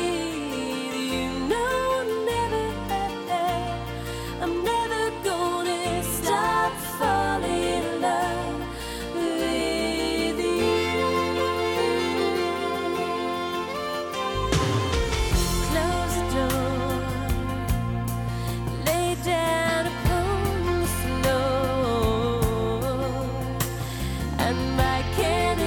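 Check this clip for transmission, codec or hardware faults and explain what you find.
Nothing here points to any transmission, codec or hardware trouble; it all sounds just as it should, with no faults to report.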